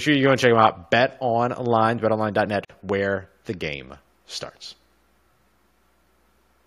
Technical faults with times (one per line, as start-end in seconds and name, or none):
2.65-2.70 gap at a join of encoded pieces